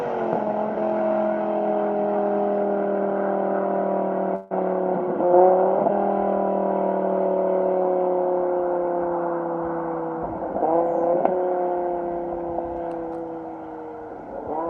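The audio breaks up at 4.35 s and recovers at 4.53 s. This is a long network dropout. For about 150 ms the sound is replaced by a fading buzz that extends the last audio before the gap. No true silence follows, because the audio returns before the fill dies away. When it comes back, about 160 ms of material is simply missing. This is likely caused by packets that never reached the receiver in time.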